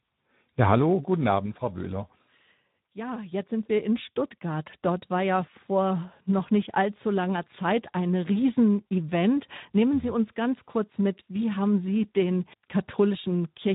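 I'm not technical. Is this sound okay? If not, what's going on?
No. Speex codec damage runs from start to finish: this old internet-call compression squeezes the speech into very little data and rebuilds it from a simplified model, leaving a plainly rough, grainy texture, and everything above 3.8 kHz is gone, so it sounds muffled.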